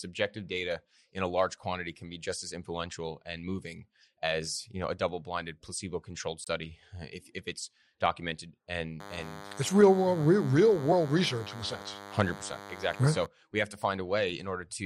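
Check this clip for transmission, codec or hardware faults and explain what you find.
Two faults are present in this speech clip.

At 6.44 to 6.49 s there is a brief glitch lasting about 44 ms. The sound skips forward. This is likely a broken MP3 bit reservoir. MP3 frames store part of their data in earlier frames. If frames are lost, the next frame reads borrowed bytes that belong to another frame. Its decoded output is corrupted for a span of roughly two 26.1 ms frames.

From 9.00 to 13.26 s a DECT cordless phone buzz runs under the speech. It is a thin, steady buzz at 100 Hz, rich in harmonics, at about 15 dB below the speech. A nearby DECT handset or base station transmits a short radio burst every 10 ms. The audio circuitry rectifies those bursts, which turns the radio pulse train into an audible tone at the burst rate.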